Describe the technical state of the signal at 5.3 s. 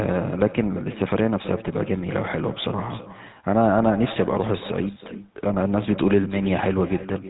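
At 5.3 s the speech carries an echo with no canceller, present for the whole clip. The far end is playing the call through a loudspeaker, and its microphone sends that sound straight back with nothing to remove it. Each phrase returns roughly a third of a second later, about 15 dB quieter. The copy sounds thinner than the original. It trails just behind the live speech like a faint second talker.

The same moment also shows the GSM full-rate codec, again across the entire clip. This codec models the vocal tract and drives it with a coarse pulse train, keeping only part of the excitation. The damage is plainly audible. Everything above 4 kHz is gone, so the speech sounds dull and narrow. The voice has a buzzy, gravelly grain, which fits the 13 kbps full-rate mode. The upstream microphone path only trims the lowest bass, which is normal, and the codec's 4 kHz ceiling is what is heard.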